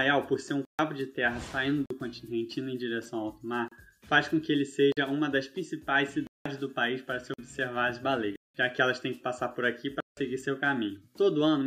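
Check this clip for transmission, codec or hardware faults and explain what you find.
The clip has repeated dropouts, blocks of digital silence at 0.65–0.79 s, 1.86–1.90 s, 3.68–3.72 s, 4.92–4.97 s, 6.27–6.46 s, 7.34–7.38 s, 8.36–8.55 s and 10.00–10.17 s. Output buffers went unfilled and were zeroed, which fits blocks of 2048 and 8192 samples. The sound cuts to dead silence and back without fades. The 33 to 46 ms gaps are heard as brief holes, and the 139 to 186 ms gaps as audible holes.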